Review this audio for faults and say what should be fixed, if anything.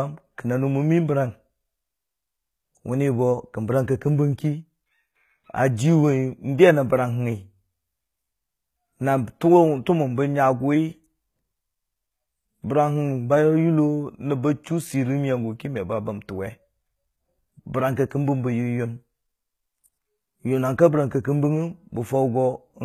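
Across the whole clip the treble sounds bright yet false: s sounds come out gritty and lispy, with a metallic sheen above the lower speech band. This is likely HE-AAC compression, whose spectral band replication copies lower bands upward and shapes them with only a coarse envelope, so the rebuilt harmonics fail to line up with the real ones at the crossover. The damage is plainly audible and fits HE-AAC v2 at around 20 kbps. To prevent it, export the speech at a higher bitrate with plain AAC or a lossless format instead of relying on band replication.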